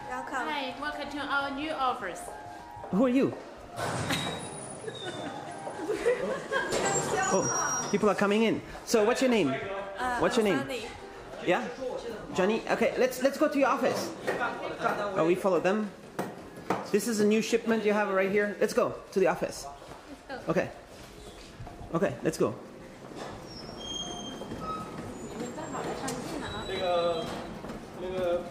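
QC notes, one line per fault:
No faults heard.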